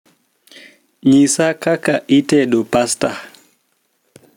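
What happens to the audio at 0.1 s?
Gain pumping runs throughout, likely from input gain set far too high with a fast limiter, so the gain swings roughly 10 dB under loud speech and loud and soft parts end up squashed closer in level.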